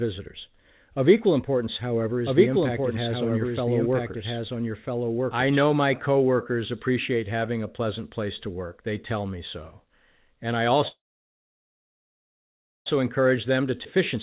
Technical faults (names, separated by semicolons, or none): doubled audio track; call audio freeze; jitter buffer speed-up; skip ahead